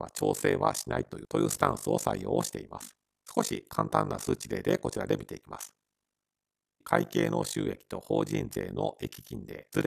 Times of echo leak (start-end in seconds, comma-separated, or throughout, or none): none